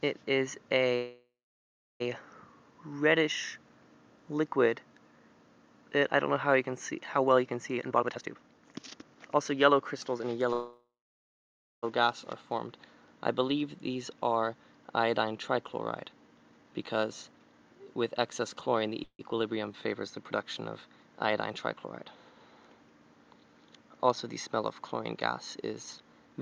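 Three call audio freezes, likely from packets delayed in transit that left the jitter buffer empty, hold the last sound as a fading buzz or hiss that then drops to silence: 0.95 to 2.02 s, 10.53 to 11.85 s and 19.04 to 19.21 s, with silent stretches of 0.68 s, 0.92 s and 0.06 s. The audio then resumes where it stopped, so nothing is missing but the gaps add delay. Jitter buffer speed-up also occurs as the overfull buffer sheds pitch-period slices. The audio runs faster at the same pitch and sounds hurried: at 142% from 7.74 to 10.20 s, cutting about a second, then at 111% from 15.49 to 17.53 s and at 112% from 25.98 to 26.42 s.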